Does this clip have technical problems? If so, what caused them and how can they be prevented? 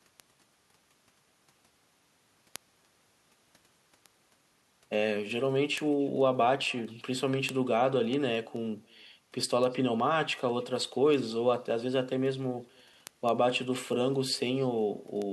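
Yes, two problems. The first is echo with no canceller: throughout the speech a faint copy, about 28 dB down, trails each phrase by roughly a third of a second. That's the far end's loudspeaker feeding back into their microphone with nothing removing it. Turning on echo cancellation at that end, or using a headset there, would stop it.

The second is word clock ticks: sharp ticks of uneven strength roughly every 0.2 s from 0.20 s to 15.22 s, around seventy in all. A receiver running on its own clock, off by something like 100 ppm, drops or repeats one sample each time the clocks slip. Locking the receiver to the sender's clock would prevent them.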